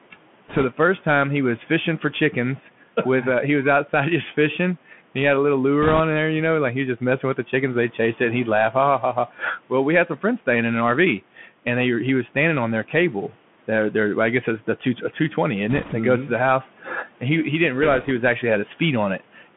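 A speech recording carried over a Bluetooth headset link, with faint room noise about 25 dB below the voice. The Bluetooth CVSD headset codec colours the whole clip. The audio is confined to roughly 150 Hz to 3.4 kHz. The narrow, muffled band and the scratchy sibilants fit a 64 kbps one-bit delta coder. Its adaptive step lags on loud high sounds, and a granular hiss sits underneath. Bit errors on the Bluetooth voice link add bursts of rushing, crackly noise. They occur at 0.48 to 0.65 s, before "the first time he". They occur again at 5.82 to 6.01 s, between "he had a little" and "there you know like". A third burst comes at 15.69 to 15.94 s. The last falls at 17.83 to 18.11 s, between "and he he didn't" and "was actually". No single bit outweighs the others and each error dies away quickly, so there are no sharp clicks. The crackle is densest around 6 s, where the error rate is a few percent. 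It is lightest near 18 s, at around one percent. At 11.37 to 11.46 s the speech is cut by the noise suppressor. For about a tenth of a second it drops by about 8 dB. The suppressor mistook that speech for background noise, so the sound there seems swallowed and faint.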